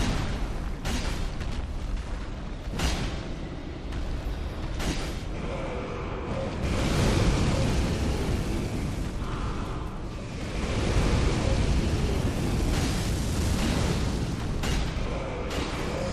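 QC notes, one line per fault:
Nothing stood out on listening to this audio.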